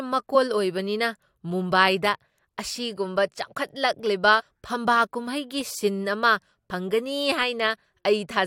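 Speech, with compressed frames skipped three times: whole frames of the coded stream never reached the output, whether missing from the file or rejected by the decoder as damaged. At 0.34 s roughly 40 ms of audio vanishes, at 4.39 to 4.41 s about 70 ms, and at 6.70 to 6.72 s about 20 ms. Each time the speech lurches forward.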